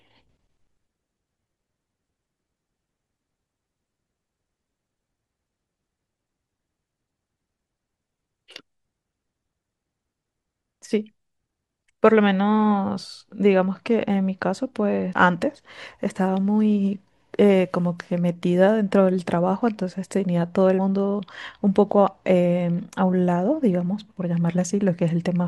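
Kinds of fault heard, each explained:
Damaged data in a compressed stream: at 15.12 s and again at 20.78 s, a brief blip breaks into the speech, each under 20 ms, where corrupted bytes made the decoder misread frames, lose sync and hunt for the next valid frame header.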